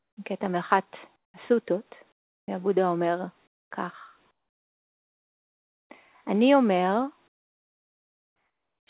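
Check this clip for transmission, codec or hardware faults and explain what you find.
Two kinds of fault turn up, both tied to the sender's voice detector, all heard through a call codec that leaves nothing above 4 kHz.

Comfort noise in place of the background shows up at 0.00–0.17, 1.16–1.34, 2.12–2.48, 3.47–3.71, 4.31–5.90 and 7.28–8.87 s. The real background, sitting about 46 dB under the loud parts, drops out and a flat, featureless hiss takes over, about 17 to 25 dB quieter. It's likely discontinuous transmission, with the receiver synthesising noise during the gaps.

Onset clipped by the voice detector happens at 2.46 s, right where that third comfort-noise stretch ends. Roughly the first 20 ms of the returning sound is missing, so it snaps in abruptly with no soft attack, likely because the detector was slow to notice sound had resumed.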